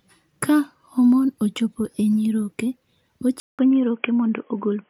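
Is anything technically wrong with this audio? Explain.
Yes. At 3.4 s, after a 0.19 s silence, the speech goes dull and band-limited to 3.3 kHz with faint new background noise, likely the input switched to a poorer device.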